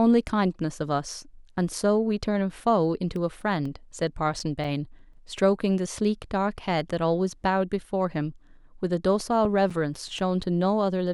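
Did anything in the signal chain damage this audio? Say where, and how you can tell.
Yes. Two bursts of regular ticks and tiny dropouts in the speech, from 3.16 to 5.63 s (11 ticks) and from 9.20 to 10.44 s (6 ticks), each lasting a few milliseconds at most, at roughly four to five per second, are CD scratch ticks from playback. A blemish on the disc wipes out more data than error correction can restore on every rotation, so the player interpolates or mutes those samples.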